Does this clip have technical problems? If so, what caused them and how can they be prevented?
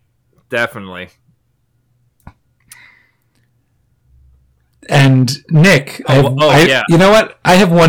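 Yes, there is hard clipping in two places. From 0.57 to 0.65 s the speech overdrives a stage by about 4 dB, so its peaks are sheared flat and briefly crackle. From 4.92 s to the end the overload reaches about 17 dB, and every loud syllable turns into harsh fuzz. On a waveform the peaks appear as flat plateaus. A spectrogram shows the added harmonics as broadband energy smeared far above the speech band. Setting input gain with enough headroom, or placing a limiter before the converter, prevents this.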